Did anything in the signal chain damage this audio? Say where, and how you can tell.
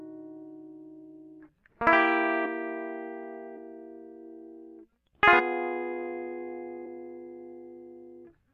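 Yes, compressed frames skipped at the decoder: the music jumps ahead about a third of a second at 2.44–2.46 s and 3.56 s, and about half a second at 5.39–5.41 s.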